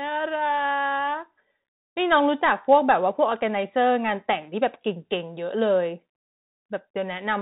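Throughout, the speech carries Bluetooth CVSD headset codec damage. Nothing passes above 4 kHz. S sounds turn scratchy, loud peaks distort, and granular hiss sits underneath.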